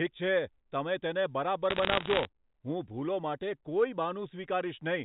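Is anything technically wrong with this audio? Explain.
Yes. From 1.70 to 2.25 s there are bit errors on a digital phone line. Through the G.711 path, band-limited below 4 kHz, scattered flipped bits, under about one percent, each corrupt a single sample. Hits on sign or high bits cause sharp isolated ticks, a brief crackle over unchanged speech. Unlike packet loss, nothing drops out or gaps.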